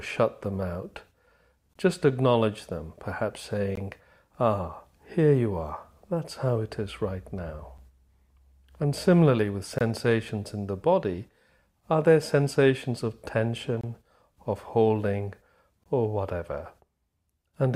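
At 1.73–1.76, 3.76, 7.78, 9.78–9.81, 13.81–13.84 and 15.84–15.86 s you get hard-edged dropouts of about 8 to 24 ms, landing on a 2-second grid. They're gaps between stream segments: timestamps don't quite meet, the player pads with silence, and nothing is actually lost.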